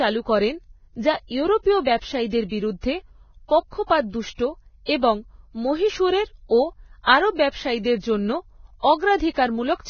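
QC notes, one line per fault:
Throughout, Vorbis compression. Nothing is audible above 6.6 kHz. The treble left in the speech is hissy and grainy, with roughened tones and blurred onsets. The likely cause is heavy coding at a very low bitrate, around 16 kbps. Coarse quantisation there turns fine detail into noise.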